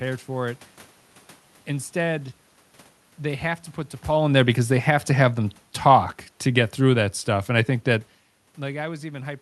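From 4.07 to 8.16 s, automatic gain falling. The gain control pulls its level down by about 5 dB. The speech and room noise sink together.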